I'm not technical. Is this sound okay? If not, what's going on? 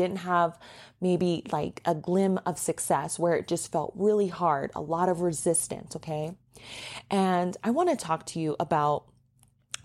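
Yes, nothing wrong can be heard in this recording.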